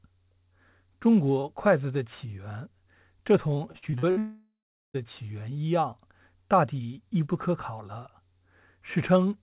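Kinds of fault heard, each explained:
Repeated packet loss (robotic sound): Between 3.72 and 4.18 s the speech turns choppy. Five short holes, the longest 58 ms, are each patched by stretching the last bit of sound, so about 40% of that stretch is synthetic fill. On a spectrogram, which tops out at 4 kHz through the G.711 call path, the harmonics freeze into flat, smeared bands between the broken segments. The waveform shows repeated, regular-looking cycles.
Long network dropout: From 4.18 to 4.96 s, about 0.76 s of audio is lost. The stretched sound first continues as a tail that fades, then about 400 ms of silence follows before the speech resumes without the missing part. The likely cause is a run of packets that never arrived. A spectrogram shows a fading smear and then an empty block across the whole 0 to 4 kHz band. The waveform decays to a flat line.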